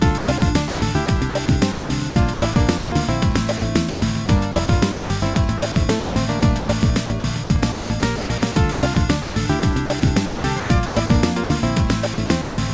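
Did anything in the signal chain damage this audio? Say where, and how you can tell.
Yes. Sound chopped by the voice detector at 0.18–0.42, 0.68–2.92, 3.90–6.68, 7.06–8.96, 9.22–11.10 and 12.14–12.58 s. Call-processing gating repeatedly swaps sound for comfort noise. The likely cause is sender-side voice detection.

Sound dropped by the voice detector at 3.58–3.62 s and 11.44–11.50 s. Brief 40 and 60 ms stretches of sound give way to steady comfort noise. This is likely the same gate mistaking quiet sound for background.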